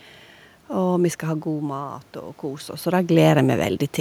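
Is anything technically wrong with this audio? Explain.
Yes. From 1.23 to 2.96 s there is automatic gain rising. The level reaching the microphone dropped by about 14 dB when the talker moved back around one second in, and the automatic gain control responded by slowly raising its gain by about 4 dB. Because it works on the whole signal, the voice and the room noise behind it swell up together over that stretch rather than the speech returning cleanly. The talker's own movements, near one second and again around two and a half seconds, are ordinary level changes at the microphone.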